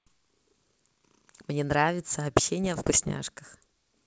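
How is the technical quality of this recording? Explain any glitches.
The recording has one clear fault, a half-second patch of corruption in the G.722 wideband link, which is running at 64 kbit/s.

Bit errors on an ADPCM link, 2.64 to 3.14 s: bits in the coded stream were flipped at a rate of roughly one in every hundred-odd bits. ADPCM decoders track a step size and a predicted next sample, so a single wrong bit throws both off, and the error keeps echoing for several milliseconds until the decoder settles. In the speech this comes through as scattered pops and rough, gritty bursts, with the level briefly jumping or dipping.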